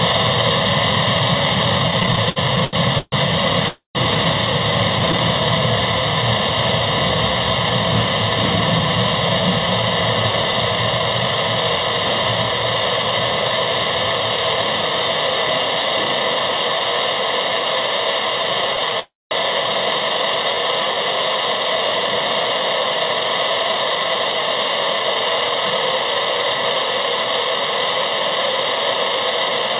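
From 1.88 to 5.20 s come repeated stalls (stutter): the jitter buffer ran dry 15 times, and the receiver stretched the last sound for up to 133 ms each time. On a spectrogram these show as smeared, frozen bands. Within that stretch, at 3.68 to 3.97 s, a call audio freeze adds a 268 ms gap, likely from packets held up in transit. The held sound fades to about 130 ms of flat silence on the waveform.

From 9.40 to 11.77 s a jitter buffer speed-up runs the sound at 106% with unchanged pitch, trimming about 150 ms. Harmonic lines stay level while events crowd closer together.

From 18.37 to 20.95 s a jitter buffer slow-down repeats pitch periods, adding 119 ms and playing at 96%. The result is drawn out, with slightly elongated harmonics.

Inside it, at 19.00 to 19.33 s, a second call audio freeze inserts 313 ms, with a 200 ms silent stretch where the waveform goes flat.

Throughout, nothing appears above 4 kHz, which fits a G.711 A-law call path.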